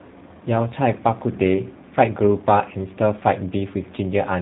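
Tandem speech coding throughout this speech clip: two speech coders in a row, consistent with CVSD then G.729A, the later re-encoding the earlier's damage, leaving rough, warbly sound with nothing above 3.9 kHz.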